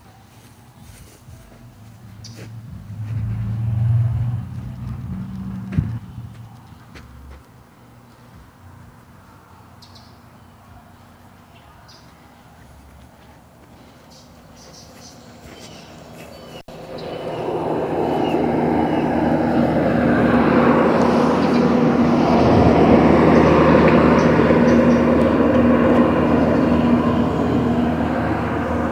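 At 16.59 s the sound drops out abruptly, with a brief crackle at the edges, and returns by 16.71 s, the line itself staying open for about 71 ms. This is an intermittent contact: a loose cable or plug momentarily breaking the signal path before reconnecting.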